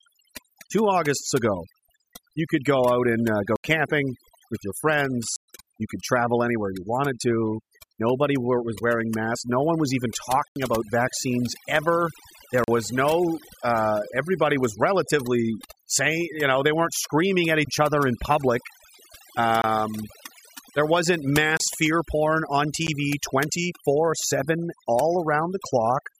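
Overdone noise removal runs through the whole speech recording. The reduction was set so strong that frequency bands near the noise estimate are pulled down or switched off, so the background drops and breaks up into twinkling specks.

Blocks of digital silence cut in at 3.56–3.64 s (80 ms, after "go out and uh"), 5.36–5.48 s (120 ms), 10.48–10.56 s (80 ms, between "one was even" and "about vaccines ever"), 12.64–12.68 s (40 ms), 19.62–19.64 s (about 24 ms), 21.57–21.60 s (about 28 ms, between "there wasn't" and "fear porn on"), and 22.87 s. Each time, a block of zeros was played with no fade. The longer gaps are heard as short holes and the briefest as ticks.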